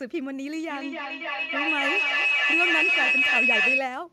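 From 0.7 s to 3.9 s, a feedback howl takes over the speech. Sound loops between loudspeaker and microphone, gaining level each pass. It narrows to a tone near 3 kHz, repeating roughly every 0.3 s, peaking about 8 dB above the speech.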